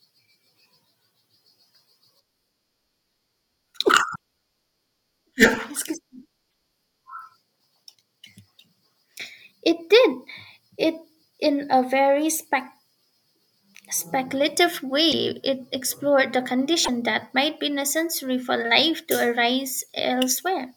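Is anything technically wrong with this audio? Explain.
Yes. Four short glitches in this speech clip, at 4.14 s, 6.49 s, 15.11 to 15.14 s, and 16.84 to 16.89 s (between "explored the" and "that might be necessary"), are likely a broken MP3 bit reservoir. After frames of roughly 24 ms were cut, the next frame reaches back for borrowed data and decodes bytes belonging to another frame. The audio jumps forward with a brief chirp, noise burst or short hole. On a spectrogram each shows as a narrow vertical smear or gap, and on the waveform as an abrupt discontinuity or jagged spike.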